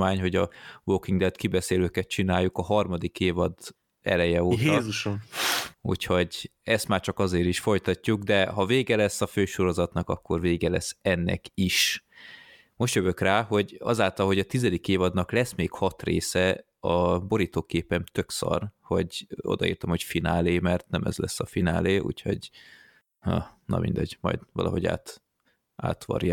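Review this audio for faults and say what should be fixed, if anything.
No faults can be heard anywhere in the recording, so there is nothing to fix. With no event to point to, no prevention step is needed.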